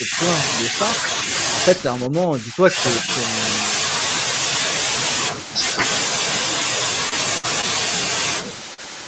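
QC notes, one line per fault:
0.00–0.19, 2.07–2.79 and 3.01–3.09 s, speech suppressed in double talk: the speech dips sharply, by about 20 dB at the very start, about 15 dB across the longest stretch and about 10 dB in the brief last one, then recovers. The likely cause is an echo canceller that heard far-end audio at the same time as this talker, could not tell the talker from the loudspeaker echo, and pulled the level down on both.
7.09–7.14, 7.61–7.64 and 8.74–8.80 s, short concealed packet loss: each spot is a brief smear or wobble rather than a clean cut. The first two replace about 20 ms of real audio and the last about 40 ms. The receiver bridged each hole by extending the preceding sound, repeating its pitch where it was voiced or filling with shaped noise where it wasn't, then cross-fading back into the decoded signal.
7.38–7.45 s, burst of packet loss: a held, fading stretch of about 60 ms where the speech stalls on the last sound and thins out before jumping ahead. 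About 60 ms of the original never arrives, which fits several consecutive packets lost or arriving too late. Concealment carried the final sound forward while lowering its level, then playback resumed further on with that section skipped.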